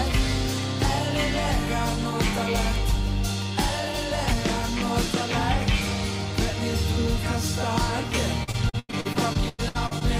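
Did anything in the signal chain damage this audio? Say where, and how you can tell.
Yes, at the network stage: repeated packet loss (robotic sound) from 8.43 to 10.03 s. Twelve gaps, the longest 98 ms, are filled by extending the preceding sound, about a third of the span, giving a choppy texture with pieces missing rather than a buffer underrun's silent holes.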